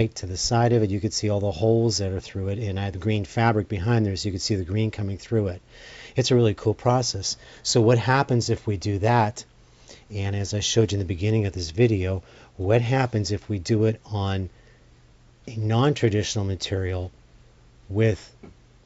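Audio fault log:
Nothing here calls for a log entry; I didn't hear a single thing go wrong anywhere in the clip.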